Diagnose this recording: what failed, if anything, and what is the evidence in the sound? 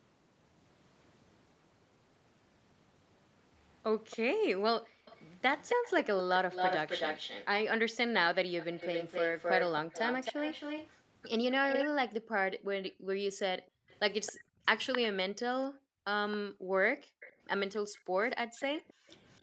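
Echo leak, at the call-processing stage. A delayed copy of the speech trails the direct sound by a constant 268 ms from 4.1 to 11.89 s, briefly at 12.88 to 12.93 s, from 13.89 to 14.98 s, and from 16.32 s to the end. In the longer stretches it sits only about 5 dB under the speech, at 12.9 s it is a faint scrap, and after 16.32 s it is roughly 20 dB down. The likely mechanism is a far-end loudspeaker whose echo canceller failed to subtract what its microphone picked up. A single distinct repeat at a fixed delay separates this from room reverberation, which smears into a decaying tail.

Background gated by the echo canceller, also in call processing. The room sound drops by as much as about 40 dB from 4.64 to 5.05 s, in patches adding up to around two seconds between 12.21 and 17.2 s, and from 18.46 to 19.08 s, then returns. The canceller is turning the microphone down hard while the far-end loudspeaker plays. 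This is not a network dropout or packet-loss concealment: the dips track echo activity, the floor falls away cleanly, and there is no glitch or smeared fill at the edges.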